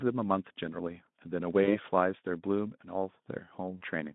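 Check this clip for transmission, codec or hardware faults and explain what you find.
VoIP packet loss concealed by the speech codec occurs twice, at 1.63 to 1.76 s and 3.77 to 3.84 s, over the Speex-coded narrowband line. About 40 ms went missing each time, fitting two 20 ms frames. The decoder extended the last pitch and filter into a buzzy tone or coloured noise that fades, and weakness lingered past the gap. Unlike a dropout, there's no silence or click.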